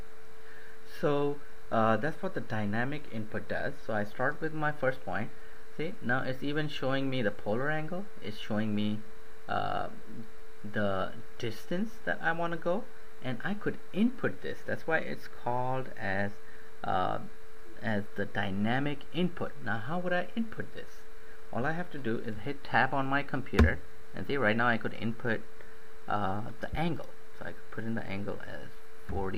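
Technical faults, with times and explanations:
26.73–26.75 s lost LE Audio frames: about 20 ms went missing, which fits two 10 ms frames. The LC3 decoder refilled the gap by reusing the previous spectrum with random signs, so tones become a brief noisy smear: harmonic lines blur on a spectrogram, and the waveform loses its regular cycles.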